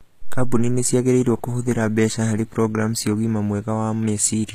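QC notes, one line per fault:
Throughout: HE-AAC compression, plainly audible across the speech. Nothing is present above about 14.9 kHz, and the treble that remains sounds synthesised rather than recorded, so sibilants come out gritty and lispy with a metallic sheen. That points to likely spectral band replication, where upper bands are copied from lower ones and shaped by a coarse envelope, at a rate near 20 kbps. Plain low-pass filtering would sound dull instead, not bright but wrong.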